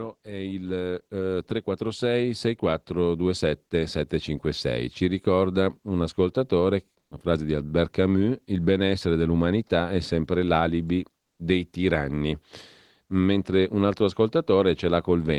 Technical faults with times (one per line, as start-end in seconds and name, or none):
0.24-7.63 automatic gain rising
6.99-7.11 comfort noise in place of the background
11.23-11.39 comfort noise in place of the background